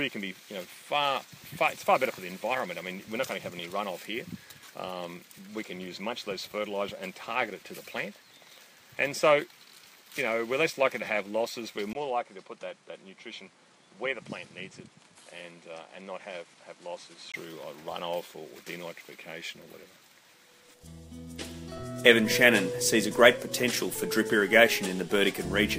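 At 11.93 s a brief gap of about 20 ms opens, and from there until 17.34 s the sound turns duller and slightly quieter, roughly 5 dB down, with a new background noise sitting around 30 dB below the signal. This is most likely an input switched to a poorer device, a narrower-band microphone path. On a spectrogram the energy stops sharply near 11.4 kHz for that stretch; the waveform shows the dropout notch and a smaller envelope until full bandwidth returns.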